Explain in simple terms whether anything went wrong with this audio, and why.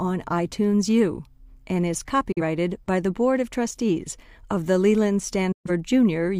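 The speech briefly drops into silence twice: a short gap between "and is" and "by the" at 2.32 to 2.41 s, and a longer one at 5.52 to 5.71 s. This is a digital broadcast dropout. The receiver lost good data, quickly faded to mute, and the missing sound never came back.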